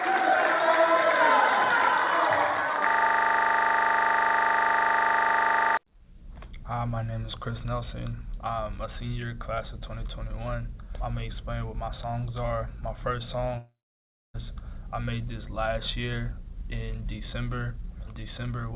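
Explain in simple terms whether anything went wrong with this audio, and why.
From 2.89 to 5.77 s, a system hang loop: a 40 ms scrap of audio repeats exactly, 25 times a second, making a rattling buzz rather than a fade.

From 13.58 to 14.36 s, the sound trails off into a fading buzz, then silence, and resumes with about 0.76 s missing. This is likely a long network dropout; unlike the loop, nothing repeats.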